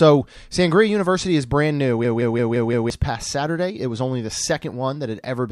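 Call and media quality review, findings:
System hang loop, 2.05 to 2.90 s: host or audio driver stalled while the output device kept replaying its ring buffer. One segment of about 171 ms, consistent with an 8192-sample buffer, repeats five times at 5.86 Hz, giving a machine-gun stutter. About a second of real speech is lost.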